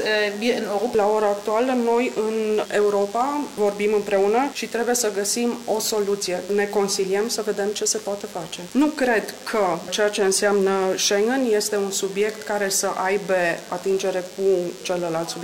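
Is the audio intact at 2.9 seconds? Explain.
No. DECT cordless phone buzz runs through the whole clip: 100 Hz radio bursts, rectified by the audio circuit, give a thin harmonic-rich buzz roughly 20 dB below the signal.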